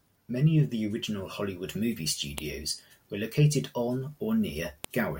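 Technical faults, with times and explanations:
2.38 s and 4.84 s, file header played as audio: two sharp, loud snaps in the speech where joined pieces kept their WAV headers. Those few dozen header bytes get read as sample values, so each piece starts with a brief burst of garbage that cracks out no matter what the talker's doing.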